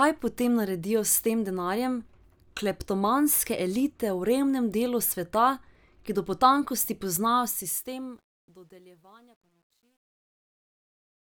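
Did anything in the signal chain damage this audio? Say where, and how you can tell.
Yes. The fade-out starting near 7 s shows truncation distortion on a fade from 7.24 s to the end. The gain stage dropped bits without dither, which fits an 11-bit word. From 8.48 s the quiet tail turns gritty.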